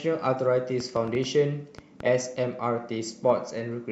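A train of clicks runs from 0.80 to 2.01 s: about seven similar pops, roughly five per second at uneven spacing, standing out above the speech, likely from electrical interference.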